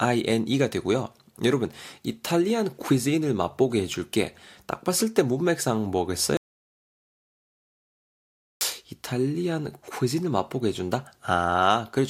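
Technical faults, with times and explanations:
6.37 to 8.61 s, audio dropout to silence: the input feeding the recorder was likely cut off for about 2.24 s, through a lost connection, a dropped link or a mute, while writing carried on with silence. The speech stops abruptly mid-flow and resumes just as suddenly. The gap between is total silence, without even room tone, and whatever was spoken in that stretch is simply absent from the recording.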